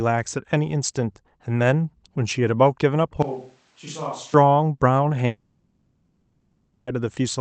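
From 3.22 to 4.34 s the speech turns abruptly roomy and hollow, loses bass, drops about 10 dB, and room noise rises to roughly 30 dB below it. This is likely a switch to a distant microphone. At 5.26 s the audio becomes a synthetic buzz continuing the last sound for 1.61 s, until 6.88 s, where speech resumes with that stretch missing. This points to a long network dropout, likely in the Opus call path, which band-limits everything at 8 kHz.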